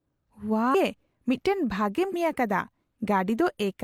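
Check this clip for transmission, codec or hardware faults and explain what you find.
Two short bursts of damaged data in a compressed stream break up the speech, one from 0.70 to 0.75 s and another from 2.09 to 2.15 s, each lasting about 50 ms. Corrupted bytes left the decoder unable to read those frames correctly, so it lost sync and searched for the next valid frame header. Each event is heard as a brief chirp, squawk, click or short hole. On a waveform it shows as an abrupt discontinuity, and on a spectrogram as a broadband smear that breaks the harmonic pattern.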